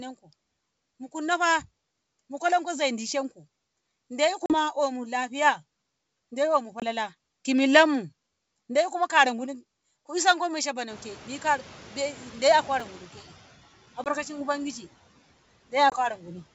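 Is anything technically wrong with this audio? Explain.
Yes, there are three kinds of fault.

Packet loss on an ADPCM call: at 4.46 s, just before "omu lafiya", a 40 ms gap, about a couple of packets. Then 20 ms drops at 6.80 s (between "dai omu" and "ki millanmu daikuma kara"), 14.04 s and 15.90 s. Each is a hard silent hole. The decoder's predictor and step size drift from the sender's, so the audio comes back with a brief, slightly distorted patch.

Noise suppressor catching up: after "ku isonko", the room noise jumps by about 21 dB near 11 s. The suppressor lags from 10.9 to 13.2 s, letting the noise through before it eventually pulls it down by about 8 dB.

Chunks out of order: at 12.80 s a roughly 5 ms chunk plays one slot late. Nothing is missing, but three hard joins make a quick jumbled moment.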